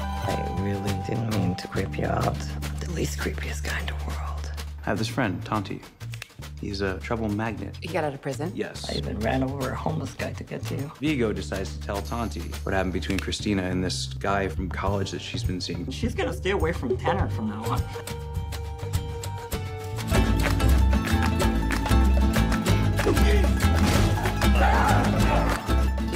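No technical faults can be heard anywhere in the recording; the signal stays continuous and stable throughout.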